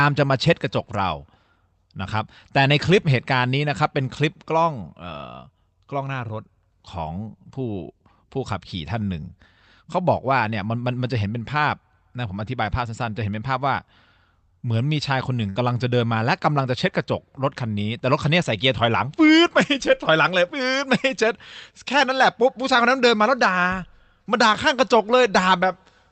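Burst of packet loss at 15.49 to 15.59 s: the receiver stretches the last sound into a fading buzz or hiss for 62 ms, then resumes with 60 ms missing.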